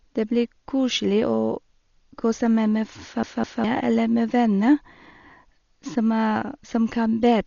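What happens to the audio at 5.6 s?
At 5.6 s, as throughout, the speech is dull, with nothing above 6.9 kHz and a rough flutter. This is likely heavy Dolby Digital compression near 40 kbps, with dither noise filling bands given no bits.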